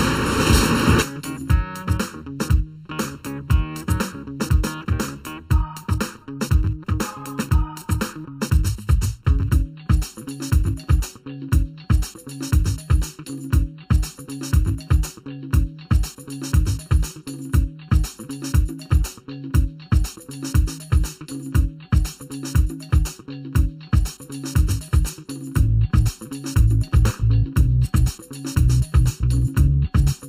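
From start to finish, the sound is hollow and phasey, the signature of channel delay (comb filtering). One channel runs late by about 0.7 ms, and when the two are summed to mono, the shared content cancels at evenly spaced frequencies, with the first notch near 700 Hz and further notches repeating up the spectrum. Unlike flanging, the notches never sweep or move, so the coloration stays constant for the whole clip.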